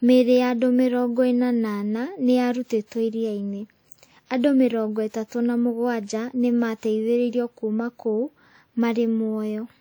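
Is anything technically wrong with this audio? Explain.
Yes. Throughout the speech there is a plainly audible ringing, washy quality, with a hiss that swells and fades along with the voice. This is likely WMA compression at a rate that fits about 48 kbps, where long transform blocks smear quantisation noise across tens of milliseconds.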